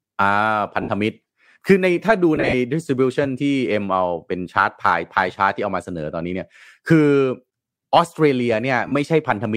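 Lost LE Audio frames occur three times, and the LC3 decoder patches each gap by replaying the last spectrum with randomised signs: 60 ms at 0.82 s, 120 ms scattered across 2.35–2.54 s in runs up to roughly 40 ms, and 37.5 ms at 8.88 s. The speech briefly smears into noise.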